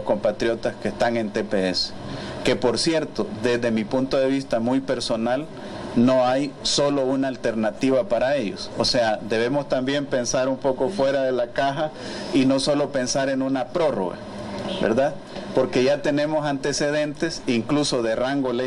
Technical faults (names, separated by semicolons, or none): none